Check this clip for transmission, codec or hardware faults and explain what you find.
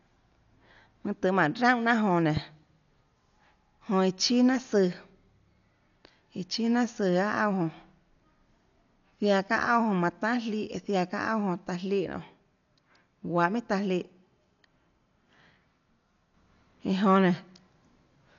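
Two faults are audible: a codec problem throughout and one loud pop.

From start to finish, the speech sounds dull and roughened, which points to heavy, likely Dolby Digital compression. Nothing is heard above 7 kHz, which fits a low bitrate near 48 kbps. The encoder trims the band and starves many frequency lines of bits. The decoder fills them with noise, so tones carry a rough flutter.

At 2.37 to 2.39 s there is a single sharp loud pop, peaking a few dB above the speech. It is likely a brief voltage spike added to the signal. The circuits after it shape it into a click-like thump. The speech continues underneath.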